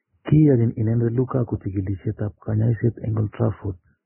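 Throughout, the speech stops at 3 kHz and sounds hissy, grainy and smeared on attacks, likely from heavy Vorbis compression at a very low bitrate.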